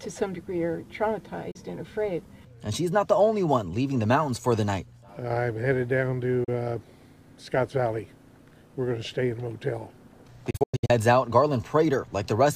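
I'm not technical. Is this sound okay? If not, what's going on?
No. There are three brief digital broadcast dropouts, where the receiver lost the signal and went silent until it recovered. Short gaps occur at 1.51 to 1.56 s and 6.44 to 6.49 s, each a quick fade into about 32 ms of silence. A longer patch from 10.50 to 10.90 s breaks into several holes, the longest about 96 ms, which fits small chunks failing one after another. Whatever was sent during those gaps is simply gone.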